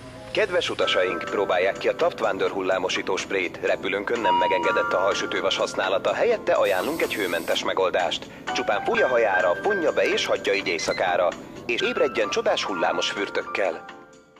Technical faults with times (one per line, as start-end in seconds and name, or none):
8.94 compressed frames skipped
11.79 compressed frames skipped